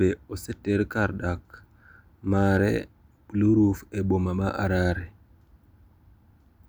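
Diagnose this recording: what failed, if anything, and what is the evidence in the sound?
A brief crackle roughens the speech peaks from 2.37 to 2.57 s: hard clipping. For that fifth of a second the level ran about 2 dB past what the converter or gain stage could pass, so the peaks were sliced flat, adding high harmonics heard as crackle.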